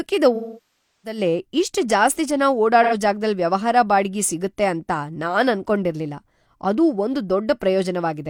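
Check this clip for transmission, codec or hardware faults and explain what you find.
The speech carries AAC frame loss with concealment twice. From 0.35 to 1.18 s, just before "ಇಷ್ಟ್ ಜಾಸ್ತಿ ಜನ", roughly 0.68 s of audio, which fits a run of about 16 frames, was missing. The decoder rebuilt it from the last good spectrum with scrambled phase, so the speech smears into a phasey, noisy wash, then fades toward silence before recovering. On a spectrogram this shows as a band of frozen, blurred harmonics dimming out, and on the waveform as a shrinking envelope. A shorter gap of about 85 ms at 2.83 to 2.93 s, between "ಇಷ್ಟ್ ಜಾಸ್ತಿ ಜನ" and "ಜಾಗದಲ್ ವ್ಯವಹಾರ ಬಾಡಿಗೆ ಸಿಗುತ್ತೆ", is a brief smeared, noisy patch that appears as a short, texture-less vertical smudge.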